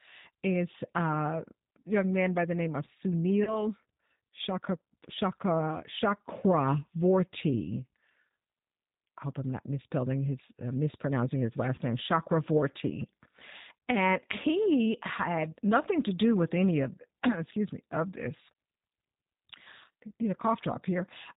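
G.729 coding runs through the whole of this speech recording, and the damage is plainly audible. The band stops at 4 kHz, so sibilants lose their edge. Each 10 ms frame is rebuilt from a vocal tract filter, a pitch predictor and a few pulses rather than the real waveform, which gives the speech a rough, slightly synthetic grain consistent with 8 kbit/s G.729A. VoIP packet loss concealed by the speech codec occurs at 3.44 to 3.67 s and again at 11.75 to 11.81 s. Each gap fits a single lost packet carrying 30 ms of audio. The decoder fills the hole by extending its last pitch and filter with falling gain, producing a brief stretched sound that fades. Because each frame builds on the previous one, the disturbance outlasts the 30 ms gap, most clearly at 3.44 s, where it lingers for over 200 ms before the signal recovers.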